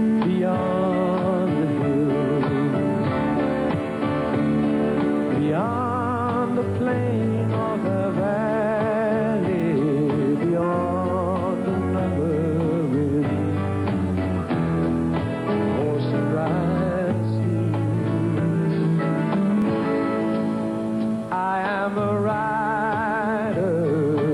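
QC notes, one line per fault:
9.60–9.62 s and 19.62–19.64 s, overlapping chunks: at each join, 10 s apart, about 23 ms of sound plays twice, giving a brief stutter-click. Unlike a chunk-boundary dropout, nothing goes missing. Each new chunk starts before the previous one ended.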